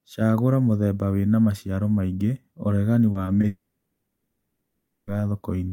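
Speech, with three quick glitches clustered together: a brief smear near 3.11 to 3.17 s, then shorter wobbles at about 3.25 to 3.29 s and 3.41 to 3.45 s. These are short concealed packet loss. Chunks of 40 ms, then 20 ms and 20 ms, did not reach the decoder in time. The receiver patched each gap by extending the preceding sound, following its pitch when voiced or shaping noise when not, and then blended back into the real signal. Almost immediately after, from about 3.47 s to 5.09 s, the sound turns into a fading buzz or hiss that ends in roughly 0.3 s of silence. Speech then resumes with that stretch simply gone. This is a long network dropout, likely a break in delivery where about 1.6 s of audio never arrived and the decoder's continuation ran out before the stream recovered.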